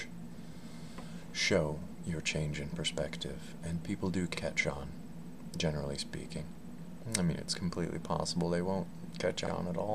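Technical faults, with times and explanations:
1.82–1.87 s, 4.37–4.42 s, 6.92–6.97 s and 9.47–9.52 s: overlapping chunks. The audio was handled in blocks of about 2.5 s, and each new block begins 50 ms before the previous one ends, so the same 50 ms of sound plays twice at every join. The duplicated fragment breaks the flow at a steady interval of roughly 2.55 s, heard as a recurring click or stutter wherever one block hands over to the next.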